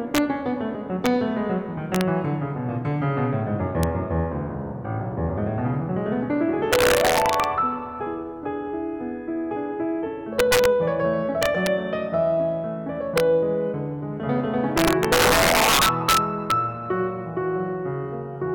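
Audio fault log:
Throughout, integer overflow: music driven about 6 dB past full scale wraps to the opposite sign on roughly half a percent of samples, giving violent cracks on peaks.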